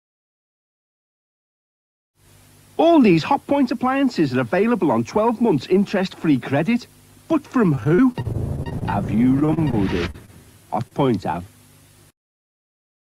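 Things fall apart first at 7.75 to 8.83 s, a stretch of repeated packet loss with a robotic sound. Twelve gaps land close together, about 180 ms of audio never arrives, and the longest hole is 37 ms. The receiver keeps bridging each one by extending the last bit of sound, so roughly a fifth of that span is patched rather than real. It comes across as choppy, with pieces dropping out. A shorter bout of the same repeated packet loss follows at 9.40 to 9.75 s. It has four gaps, about 60 ms lost and the longest at 29 ms, and around a quarter of that stretch is filled in. It has the same robotic, clipped quality.

After that come isolated short concealed packet losses at 10.11 to 10.16 s, 10.88 to 10.93 s and 11.32 to 11.35 s. About 40 ms goes missing in the first and 20 ms in each of the others. The decoder papers over each hole by carrying the previous sound forward and then blending back into the real audio. 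Each one is a quick smear or wobble rather than a clear dropout, though anything very short falling inside the hole can simply disappear.

Mixed in are two short stalls from a late packet, at 10.26 to 10.30 s and 11.07 to 11.10 s. Nothing is lost in either. The jitter buffer ran dry for a moment, so the last sound was held about 20 ms and then about 15 ms until the packet showed up, and playback carried on from the same point. You hear a sound hanging on slightly too long, with a faint buzz or dip.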